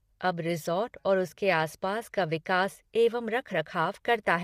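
Low-delay AAC compression runs throughout this speech. Its roughness is plainly audible, likely from AAC-ELD near 32 kbps, whose short frames blur harmonics and leave grainy noise between them.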